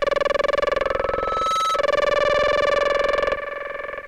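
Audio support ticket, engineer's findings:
Pure tone at 1.3 kHz swelling over roughly 0.7 s, 0.82 to 1.89 s, reaching about the programme's own level. Loudspeaker feedback squeal: mic picking up its own speaker, loop gain above unity at 1.3 kHz, self-sustaining until loop broken.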